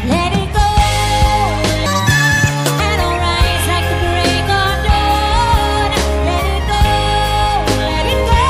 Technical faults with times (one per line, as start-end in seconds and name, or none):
1.86-2.80 section at the wrong speed